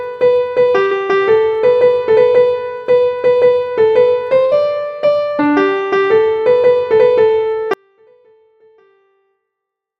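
At 0.85 s and again at 4.45 s there is a burst of packet loss. Each time a short run of audio failed to arrive in time, and the receiver held the last sound and let it decay rather than go silent. That concealment covers about 54 ms in the first gap and 66 ms in the second. When playback resumes at 0.94 s and 4.54 s, about 60 ms of material has been skipped, so the sound jumps forward after a brief smeared tail.

From 7.74 s to the end, the signal drops out abruptly to a faint residue, with no fade or taper. The break was likely in the source feed while the path after it stayed live. What remains is a faint trace of the sound, roughly 40 dB below its normal level, audible only as a distant leak until the clip finishes.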